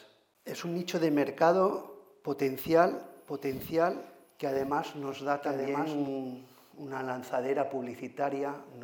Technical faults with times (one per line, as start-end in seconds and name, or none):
3.00-6.08 doubled audio track